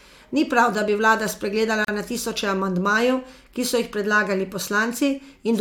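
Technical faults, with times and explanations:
1.85–1.88 s, gap at a join of encoded pieces: separately encoded 4 s segments were joined without trimming the encoder's start delay and end-frame padding. A 38 ms silence with smeared edges cuts in after "prav da bi vlada", then "na tisoče" resumes.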